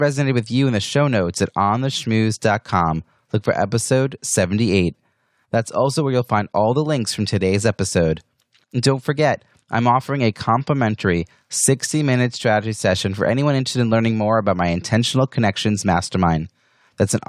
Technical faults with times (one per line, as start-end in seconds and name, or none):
none